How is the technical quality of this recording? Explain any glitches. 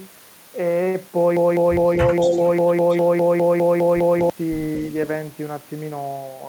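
The recording has three kinds of glitch, all clustered between about 1.4 and 4.3 seconds.

From 1.37 to 4.30 s, a broken-record loop: a 203 ms fragment repeats fourteen times back to back, likely because playback or the stream stalled and resent its last buffer, losing the original audio.

At 2.20 to 2.49 s and again at 2.90 to 2.95 s, an echo leak adds a faint copy of the speech, delayed by 230 ms and roughly 20 to 25 dB quieter. The likely cause is a far-end echo canceller letting loudspeaker pickup slip back into the call.

From 2.27 to 2.40 s, the speech is suppressed in double talk, dipping by a few decibels for around 150 ms. This likely happened because the echo canceller turned everything down while both sides overlapped.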